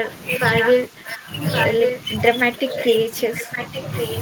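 Speech suppressed in double talk at 0.00 to 0.05 s: the opening dips by about 5 dB for roughly 50 ms, likely because an echo canceller heard both sides at once and turned everything down.

Echo leak from 0.05 to 1.98 s: a copy of the speech returns about 1.12 s late, only about 5 dB below the direct sound. It is likely a loudspeaker echo that the far end's canceller failed to remove.

Speech suppressed in double talk again at 0.88 to 1.31 s: the level drops by up to about 10 dB while that echo overlaps.

The same suppression returns between 2.07 and 3.73 s, with dips of about 5 dB covering roughly half a second in total.

Echo leak from 2.76 s to the end: the 1.12 s delayed copy is back, weaker at about 10 dB below the speech.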